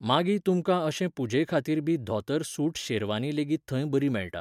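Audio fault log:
Nothing wrong turns up anywhere in this speech recording.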